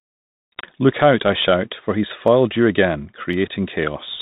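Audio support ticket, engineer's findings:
Clock drift buffer slips, 0.17 to 3.33 s: regular clicks every 1.05 s during speech. Likely two unsynced device clocks, a few hundred ppm apart, dropping or repeating small sample blocks.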